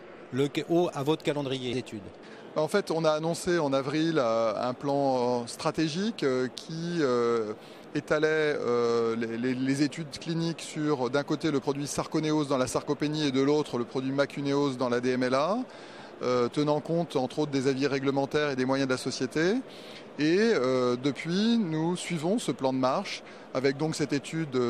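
Damaged data in a compressed stream: part of the coded audio arrives wrong, so the decoder misreads the affected frames, loses its place and has to hunt for the next valid frame header before decoding cleanly again. Each time this happens it leaves a brief, harsh digital chirp or blip that cuts across the sound, heard at 1.72 s, 7.83 s and 11.61 s. Each lasts under 20 ms, short enough to register as a click-like squawk or short hole.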